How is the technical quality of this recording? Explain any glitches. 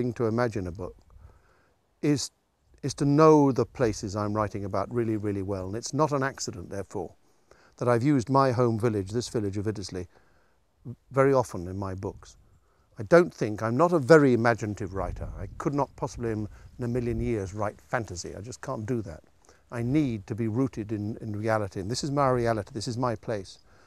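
Nothing in the recording stood out as a technical problem on listening.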